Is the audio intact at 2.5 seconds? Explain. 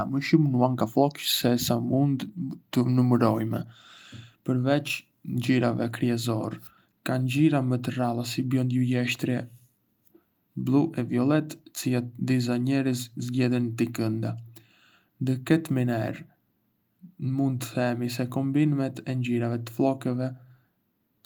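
Yes, the audio is intact at 2.5 seconds, with no fault audible at that moment.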